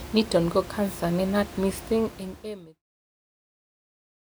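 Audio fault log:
Nothing stood out on listening; the room noise sits about 16 dB below the speech, and the gradual fade-out reaching its end at 2.84 s is a smooth edit.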